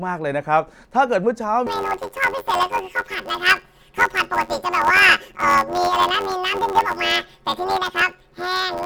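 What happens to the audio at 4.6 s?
At 4.6 s the speech is caught in planar audio read as interleaved, running from 1.67 s to the end. Each 10.88 ms block of left-then-right samples plays as two double-speed halves, giving a robotic 92 Hz buzz with no clear octave shift. A spectrogram shows evenly spaced 92 Hz striations, and the waveform shows a pattern that recurs every 10.88 ms.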